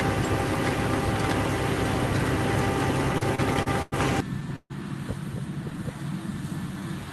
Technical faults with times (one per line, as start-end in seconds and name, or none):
3.13-3.94 repeated stalls (stutter)
4.56-4.72 call audio freeze
5.70-6.89 jitter buffer slow-down